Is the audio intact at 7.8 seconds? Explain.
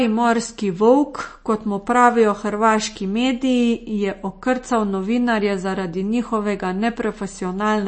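No. At 7.8 seconds, as throughout the clip, the speech shows likely MP3 compression at a low bitrate, consistent with about 32 kbps: the treble is cut off above 8.3 kHz, and weak spectral lines flicker between frames, giving a watery, swirling texture with smeared consonants.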